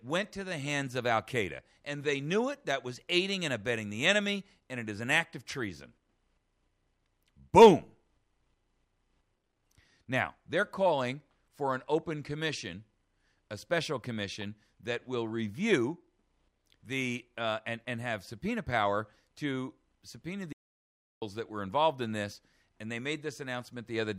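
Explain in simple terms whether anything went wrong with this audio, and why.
Near the end, from 20.53 to 21.22 seconds, the sound suddenly cuts to total silence for about 0.7 seconds, with no background hiss at all, then resumes mid-flow. This is an audio dropout to silence, likely from the input briefly disconnecting while recording continued.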